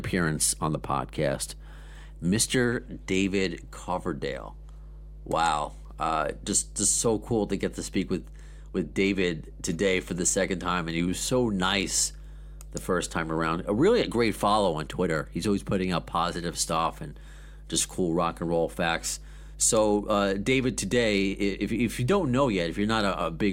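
Mains hum runs under the speech from start to finish. A ground loop or nearby transformer leaks the 50 Hz power line in. It sounds like a steady low drone, roughly 15 dB below the speech.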